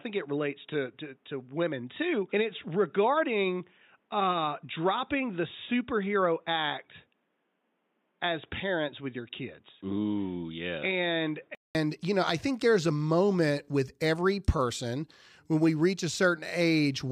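From the start to 11.75 s the speech is dull and boxy, with nothing above 3.8 kHz, noticeably quieter and over a faint background noise of its own. At 11.75 s a silence of about 200 ms breaks the sound, and the speech returns full-band and clear. This is likely an input switched to a poorer device. A plain low-pass filter or codec bandwidth drop would not change level, noise and tone at once, nor leave that gap.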